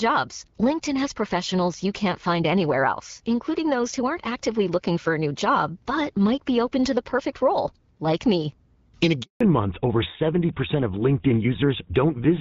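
From 9.23 to 9.41 s the sound cuts out for 180 ms in a handover gap, as the call switches networks and no speech frames arrive. The sound dies within a few tens of milliseconds and stays in flat silence. A codec dropout would usually be patched over with concealment noise or repeated sound instead.

From 9.41 s to the end, a fallback to narrowband takes hold. Before the gap, the HD Voice path sounds clear with only light coding damage, which fits AMR-WB at 12.65 kbit/s. After it, nothing above 4 kHz remains, consistent with a switch to GSM full rate at 13 kbit/s. The sound turns dull and rougher, and the change persists rather than fading back, unlike a brief filtering glitch.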